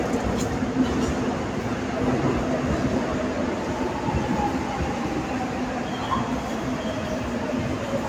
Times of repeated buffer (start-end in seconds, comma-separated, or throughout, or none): none